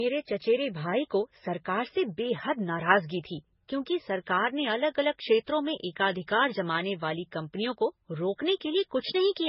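Throughout, the speech stops at 5.5 kHz and carries two distinct kinds of coding artefact layered together. That points to transcoding between lossy codecs, likely low-rate MP3 re-encoded as Vorbis, not one encode's single texture.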